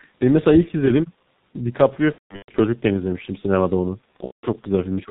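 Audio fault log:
throughout: G.723.1 codec, speech sounds muffled and hoarse with smeared consonants, nothing above 4 kHz, which fits a heavily compressed stream around 6.3 kbit/s.
2.12 to 2.60 s: VoIP packet loss concealed by the speech codec, the voice is stretched and fades in patches as 330 ms of frames go missing over 420 ms, longest gap 180 ms.
4.25 to 4.46 s: VoIP packet loss concealed by the speech codec, about 180 ms of sound is stretched and fades while the decoder extrapolates over the missing frames.
5.05 to 5.10 s: speech suppressed in double talk, the voice dips sharply, by roughly 15 dB over the final 70 ms or so, likely an echo canceller ducking during simultaneous talk.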